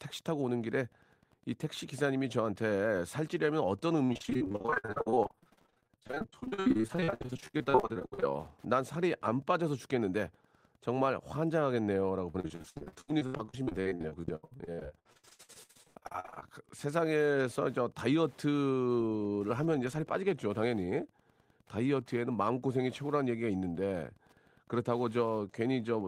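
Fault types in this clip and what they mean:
Wi-Fi interference: Faint steady ticking about ten times a second under the speech, from a nearby Wi-Fi radio's 102.4 ms beacon being rectified by the audio circuit.
Repeated packet loss (robotic sound): Choppy speech from 4.05 to 8.32 s and 12.31 to 16.47 s, where nearly half the audio was lost and patched by extending previous sound.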